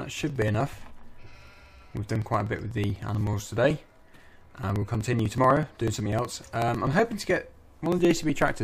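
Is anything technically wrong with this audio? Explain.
Yes. From 0.11 s to 8.55 s there is a steady, rapid ticking, about 16 clicks per second, audible only while there is signal. These are periodic USB or driver dropouts. Every 0.062 s something stalls the USB link or audio driver, and a sliver of audio around 2 ms long is skipped outright rather than filled with silence. Each jump in the waveform makes a tick, and there are well over a hundred of them.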